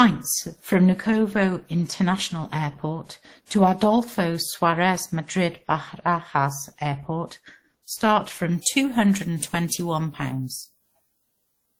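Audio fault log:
Throughout: transcoding between lossy codecs. The speech carries two kinds of coding damage at once: a smeared, low-rate texture under a second encoder's own artefacts, with content up to 20 kHz. This likely comes from a 16 kbit/s Opus stage re-encoded as 64 kbit/s WMA. A single codec would show one consistent artefact character.
8.51–11.79 s: pre-emphasis left on. From 8.51 s the treble jumps by about 10 dB at 10 kHz relative to 1 kHz, and the speech turns thin, bright and hissy on sibilants. This fits a 50 µs FM boost whose matching cut was never applied. It is a fixed tilt, not a codec artefact.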